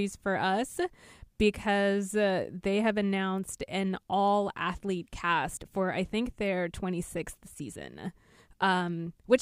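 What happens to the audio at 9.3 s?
At 9.3 s the speech plays through intact, with no dropout, click or other fault at that moment.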